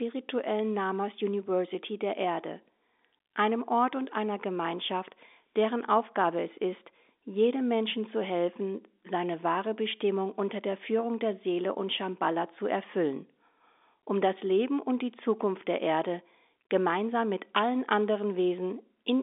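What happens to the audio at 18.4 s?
Nothing goes wrong at 18.4 s: the speech carries on intact through that moment, with only the narrow telephone band of the G.711 line, which passes nothing above about 3.7 kHz.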